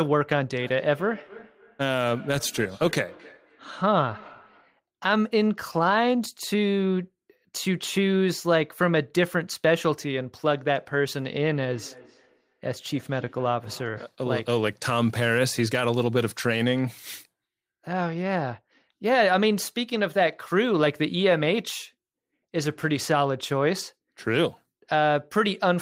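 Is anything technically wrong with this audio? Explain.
Yes. Feedback echo between two devices appears from 0.56 to 4.76 s and again from 11.54 to 14.17 s. A second device in the room replays the call and that microphone recaptures it, beyond its echo canceller's reach. Speech returns roughly every 300 ms, thinner and ringing, peaking about 23 to 24 dB below the talker.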